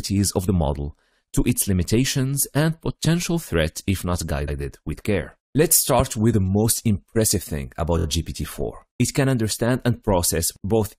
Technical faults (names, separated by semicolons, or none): repeated frames; loud pop